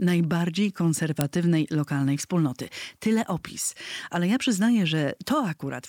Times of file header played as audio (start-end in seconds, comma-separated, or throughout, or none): 1.21